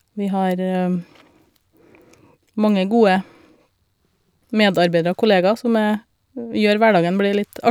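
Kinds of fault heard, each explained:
No audible faults in this speech recording.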